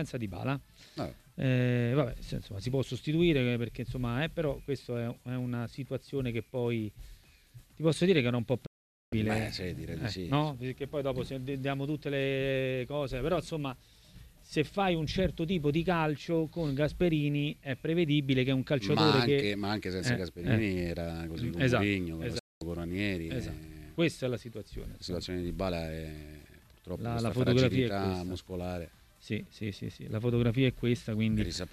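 At 8.66 s the sound fades out within about 8 ms and stays silent until 9.13 s. That is a digital broadcast dropout. The receiver lost good frames and muted instead of playing corrupt data. The hole lasts about 0.46 s, which fits roughly 19 lost frames. A shorter dropout follows at 22.39 s, lasting about 0.22 s until 22.62 s, which fits about 9 frames. Each time, the audio resumes later in the programme. Whatever was sent during the gap is gone.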